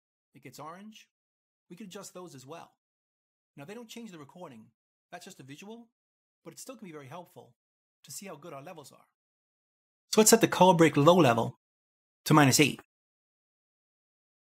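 One channel inverted, 0.0 to 10.13 s: the audio drops about 25 dB, likely because one side's reversed polarity cancelled the common sound in the mono sum.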